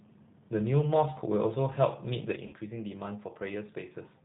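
The whole recording has passed through the G.729 codec at 8 kbit/s, which models each 10 ms frame as a vocal tract filter plus a pitch predictor and a handful of pulses. Everything above 4 kHz is gone, so the speech sounds narrow and muffled, and the codec damage is plainly audible: a rough, slightly synthetic grain on every syllable and a warble wherever the signal is noisy rather than voiced.

At 2.36 s there is a sudden gain jump. A digital level change was likely applied in a single step with no ramp, cutting the gain by about 6 dB. The speech and the background noise drop together at that instant, and the quieter level holds through to the end of the clip.

From 2.47 to 2.55 s comes VoIP packet loss concealed by the speech codec. About 60 ms of audio never arrived, which fits three 20 ms packets, and the decoder filled the gap by repeating its last pitch and filter settings while turning the level down frame by frame. 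What you hear is the sound smearing into a buzzy tone or coloured noise that fades. Because each frame is predicted from the one before, the speech stays thin and distorted for a short while after real packets resume.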